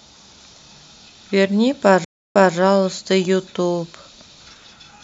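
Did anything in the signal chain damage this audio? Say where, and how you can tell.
Yes. At the network or streaming stage, a stream reconnect breaks the speech from 2.05 to 2.56 s. The sound drops to about 0.3 s of complete silence, then resumes about 0.21 s earlier than where it stopped, so a short stretch is heard twice. On a spectrogram this is an empty vertical band followed by a repeat of the pattern just before it. The waveform ramps back in from zero as the freshly started decoder begins output.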